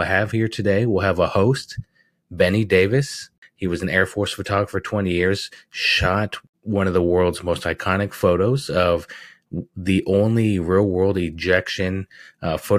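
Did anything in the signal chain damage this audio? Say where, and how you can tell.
No, nothing in the signal chain has audibly damaged this speech recording. No point in the clip shows the sound being altered by capture, processing, transport or playback.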